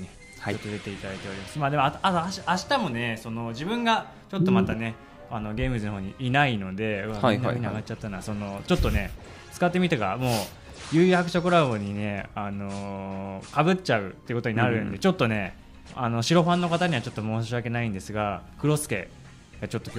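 No technical faults are audible.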